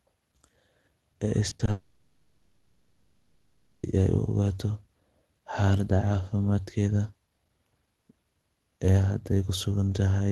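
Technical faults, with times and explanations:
1.49 s, 1.57 s and 1.65 s: short concealed packet loss. About 20 ms of speech went missing three times in quick succession, and each gap was bridged by extending the preceding sound before blending back, heard as small smears or wobbles. The spectrogram shows brief blurred patches where harmonics stretch without change.
1.71 to 3.85 s: long network dropout. For about 2.1 s the original speech is gone, and the gap is filled with a synthetic continuation of the last sound rather than silence, likely because audio stopped arriving over the network. The waveform shows no gap, but the spectrogram shows smeared, unchanging texture in place of normal speech structure until real speech resumes.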